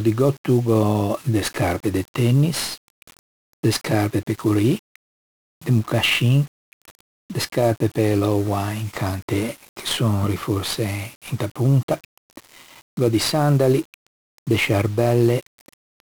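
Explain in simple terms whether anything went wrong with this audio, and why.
Yes: the whole speech clip suffers 1-bit DFPWM compression, which stores one rough up-or-down step per sample, leaving heavy fuzzy crackle and hiss that buries the treble.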